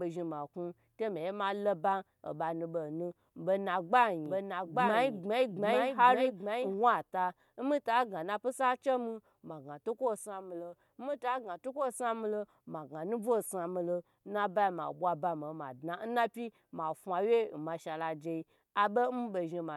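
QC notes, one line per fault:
4.26–6.74 s, doubled audio track: a second full-band copy of the speech runs about a second behind, a few dB quieter, with no decay or room colour, and cuts in and out abruptly. Likely a slower second capture path or an edit holding two copies.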